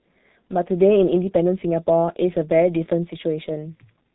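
From start to finish the speech has passed through a G.723.1 codec, an early internet-telephony coder that rebuilds the voice from a coarse model updated only once per frame; the heavy damage heard here fits a bitrate around 6.3 kbit/s. Nothing survives above 3.8 kHz, so the speech sounds muffled and boxed-in. The slowly refreshed voice model leaves a rough, hoarse texture, and consonants smear into one another instead of landing crisply.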